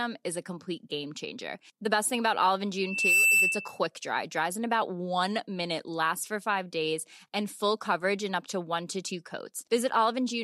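At 2.80 s a loudspeaker feedback squeal sets in and runs to 3.79 s. The microphone is catching its own loudspeaker, and around 2.7 kHz the loop gain tops unity, so that single frequency feeds on itself. It swells over roughly a third of a second into a piercing whistle about 10 dB above the speech. A spectrogram shows one bright horizontal line at 2.7 kHz, and the waveform's envelope balloons through that stretch.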